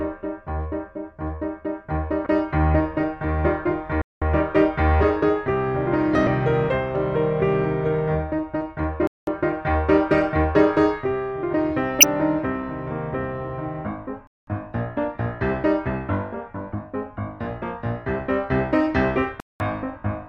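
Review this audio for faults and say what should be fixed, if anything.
Damaged data in a compressed stream at 2.23, 6.24, 12.01 and 16.71 s: each 30 ms blip is corrupted frames the decoder misreads while resyncing, showing as broadband smears on a spectrogram. Checksum and resend damaged frames before decoding.

Gaps between chunks at 4.02, 9.07, 14.27 and 19.40 s: 200 ms hard-edged silences at the joins of roughly 5 s chunks, flat-line cuts on the waveform. Trim codec padding and queue each chunk before the previous one ends.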